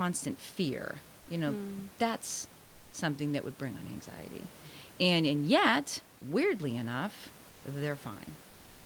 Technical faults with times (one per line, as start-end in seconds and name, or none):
1.19-1.27 comfort noise in place of the background
7.49-7.63 comfort noise in place of the background